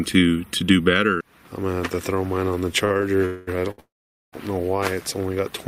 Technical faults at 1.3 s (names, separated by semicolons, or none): none